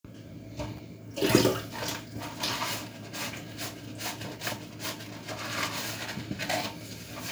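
An everyday sound recording with a sharp electrical switching spike right at 0.77 s, a brief sharp transient sitting on top of the sound rather than part of it. It's likely a nearby switch, motor or static discharge arcing briefly and getting picked up on the audio line.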